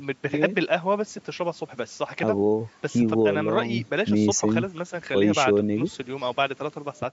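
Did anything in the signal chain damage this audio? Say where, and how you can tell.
No, only ordinary call microphone processing shaped this speech.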